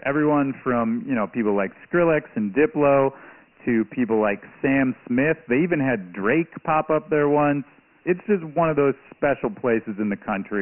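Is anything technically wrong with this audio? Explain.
Yes. Throughout the speech, Dialogic VOX ADPCM coding: 4-bit adaptive steps at a rate consistent with 24 kbps, likely 6,000 samples a second, leave a gritty hiss riding on the voice. A spectrogram shows a hard ceiling near 3 kHz and a thin low end below 200 Hz, with speckled noise filling the gaps.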